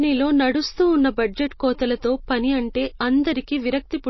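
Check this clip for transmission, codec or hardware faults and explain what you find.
One codec fault runs through the whole clip. MP3 compression, throughout: with too few bits available, the encoder likely discarded everything above 5.8 kHz and zeroed quieter frequency lines that flicker between frames, which fits a low bitrate around 24 kbps. The speech sounds plainly dull, watery and swirly, with smeared consonants.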